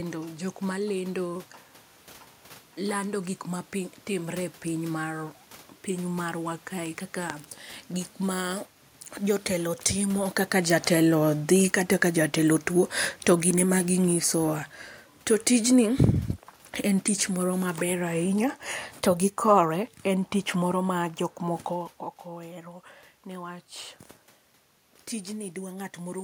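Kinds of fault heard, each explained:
Automatic gain falling, 9.98 to 21.04 s: the gain control judged the input too loud or its background noise too strong and eased its gain down by about 10 dB, so the speech and the room noise behind it sink together, unlike the talker's own movement near 10 s.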